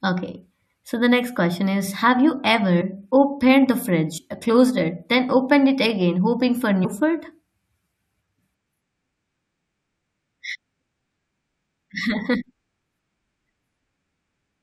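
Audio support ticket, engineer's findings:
Compressed frames skipped at 2.80 s, 4.17–4.19 s and 6.84 s. Speech jumps ahead roughly 70, 100 and 70 ms, consistent with a few 21.3 ms frames dropped by the decoder. Spectrogram shows harmonic tracks cut at each join.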